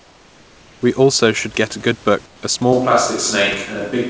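From the start to 0.82 s, and again from 2.26 to 2.42 s just after "should get a good", the background is replaced by comfort noise, likely because discontinuous transmission stopped sending audio in the pauses and the receiver synthesised filler. The real room noise becomes a smooth, featureless hiss, about 4 dB quieter in the first stretch and about 8 dB in the second. On a spectrogram these spans show an even, textureless wash, and the waveform envelope drops and flattens at each edge.

From 2.73 s to the end the sound has a switch to a distant microphone, likely because the close microphone's signal was lost and a farther one took over. The level stays about the same, but the tone turns abruptly hollow and roomy with thinner bass. The room noise sits well below the speech, roughly 35 dB down. On a spectrogram the low end weakens and reverberant smearing trails each syllable from that point. 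The waveform's transients look softer and less sharply defined. Throughout, nothing appears above 8 kHz, which fits the G.722 call codec on the call path.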